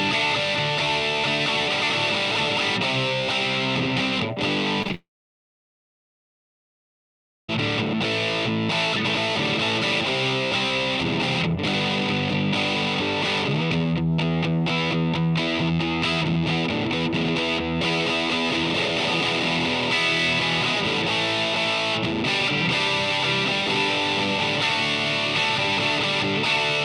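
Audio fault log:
4.82–4.95 s: repeated packet loss (robotic sound). Four short holes, the longest about 27 ms, fall inside 0.12 s, and about 42 percent of that span is concealed. The receiver patches each hole by looping the last fragment, so the sound turns choppy with pieces missing. On a spectrogram the harmonics smear into short flat-topped blocks separated by thin seams, and on the waveform small repeated cycles appear with abrupt joins.
4.95–7.49 s: long network dropout. About 2.5 s of audio never arrives, and the likely cause is an extended network outage rather than a pause in the source. The receiver first carries the last sound forward as a brief fading buzz or hiss, then roughly 2.4 s of near-silence follows until audio resumes at 7.49 s without the lost part. The spectrogram shows a decaying smear collapsing to an empty dark band, and the waveform goes flat before an abrupt restart.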